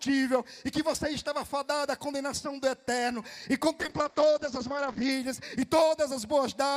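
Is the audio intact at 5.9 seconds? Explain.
Yes, the audio is intact at 5.9 seconds, with no audible fault at that moment.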